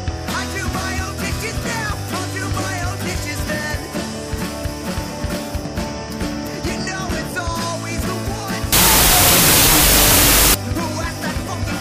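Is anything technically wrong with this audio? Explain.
Yes. From 8.73 to 10.54 s there's a wrong sample width: it sounds like 32-bit float data read as 16-bit integers, so mismatched bytes become loud noise, with the original buried underneath at half speed and an octave low.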